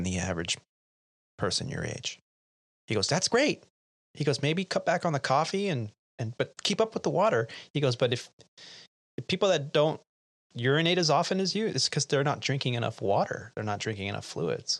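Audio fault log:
Nothing to log here: the speech runs along without a single fault to note.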